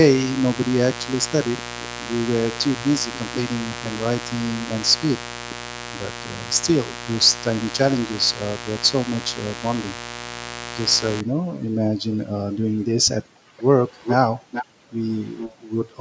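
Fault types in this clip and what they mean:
Mains buzz: from 0.0 to 11.2 s a steady, raspy 60 Hz buzz sits only about 10 dB below the speech, its sharp switching spikes twice per cycle spreading harmonics well up the spectrum, the kind of interference a dimmer, rectifier or unshielded line lets in.
Background gated by the echo canceller: at 12.54 to 13.65 s, 14.66 to 14.95 s and 15.56 to 15.72 s the room sound drops by up to about 40 dB, roughly 0.7, 0.3 and 0.15 s in all, as the canceller clamps the microphone while far-end audio plays.
Echo leak: from 13.57 to 15.56 s a delayed copy of the speech trails the original by about 0.45 s at only about 5 dB down, likely residue from a far-end loudspeaker that the echo canceller there failed to remove and sent back.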